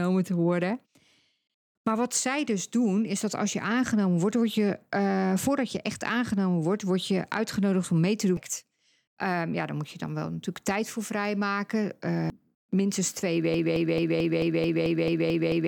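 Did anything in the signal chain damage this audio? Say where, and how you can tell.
Yes. A CD skip occurs at 8.37 s and again at 12.30 s, each a tick with a mute of only a few milliseconds before the speech resumes from a different point. This happens at the playback stage: the laser jumped to another turn of the disc's spiral and picked up reading there.

A broken-record loop begins at 13.54 s and runs to the end, with a 220 ms fragment repeating exactly, back to back, ten times. The cause is likely a stalled player or stream buffer re-sending the last fragment it held, so the speech that should have followed is lost.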